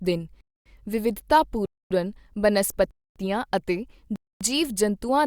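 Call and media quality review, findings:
Gap between chunks at 0.41, 1.66, 2.91, 4.16 s: 250 ms silences between 1 s chunks of speech; player or padding inserts silence at chunk joins, nothing dropped.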